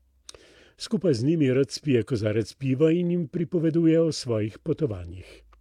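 No technical faults can be heard anywhere in the recording; the signal stays continuous and steady throughout.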